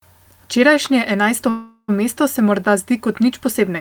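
A speech recording with a call audio freeze from 1.49 to 1.90 s: the last sound is stretched into a fading buzz or hiss for about 390 ms, with roughly 40 ms of near-silence, before the talker resumes with "mesto se morda zdi" exactly where they left off. The likely cause is delayed packets emptying the jitter buffer. Unlike packet loss, which cuts out part of the speech, nothing is missing here. The remaining speech simply arrives about 390 ms later.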